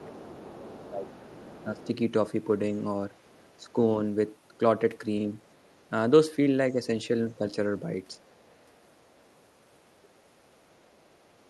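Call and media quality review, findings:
Other side's voice leaking through, 0.00–1.87 s: second voice audible at about 20 dB under the talker. Likely residual echo: far-end loudspeaker playback reaching the mic, canceller not fully removing it. 3.11–5.90 s: same, fainter, about 35 dB down. 7.32 s to end of clip: faint leak again, about 35 dB down, likely the same residual echo.

Speech suppressed in double talk, 0.00–1.91 s: talker's level dips in pieces, deepest around 15 dB, roughly a second affected overall. Likely echo canceller unable to separate near-end speech from concurrent loudspeaker echo, attenuating both. 3.61–3.78 s: brief dip of about 10 dB. 6.73–8.21 s: short dips of about 10 dB, only a fraction of a second in total, same mechanism.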